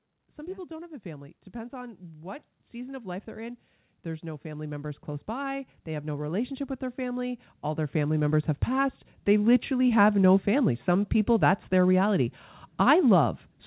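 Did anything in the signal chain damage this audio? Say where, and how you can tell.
Yes, in call processing: automatic gain rising from 0.14 to 10.13 s, with the AGC lifting speech and background together by about 19 dB. The waveform envelope widens steadily.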